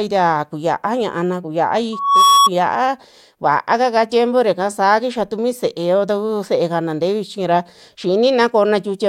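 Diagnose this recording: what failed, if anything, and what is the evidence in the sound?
Loudspeaker feedback squeal, acoustic playback loop: a 1.1 kHz tone swells over about a third of a second from 1.92 s to 2.49 s, peaking about 5 dB above the speech.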